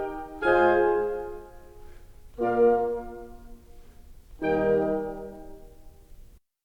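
Nothing in this bit of music stands out as a technical fault, so there's nothing here to point to.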